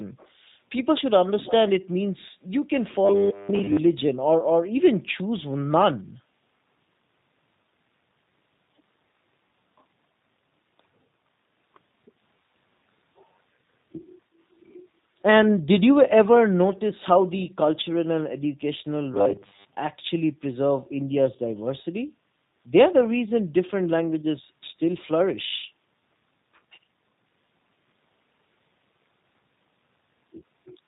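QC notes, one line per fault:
throughout, G.729 codec: plainly audible coding damage. Nothing above 4 kHz survives, and the speech has a rough, slightly synthetic texture. The coder rebuilds each frame from a vocal tract filter, a pitch predictor and a few pulses, which fits an 8 kbit/s G.729A stream.
1.39–1.54 s, echo leak: a brief, faint copy of the speech arrives 294 ms after the original at roughly 15 dB below it. The likely cause is an echo canceller on a far-end loudspeaker side letting part of its microphone pickup through, which was then sent back.
24.46–24.62 s, background gated by the echo canceller: the room sound dips by about 8 dB for roughly 150 ms, then returns. The canceller has pulled the microphone down hard while the loudspeaker played and released it once playback stopped.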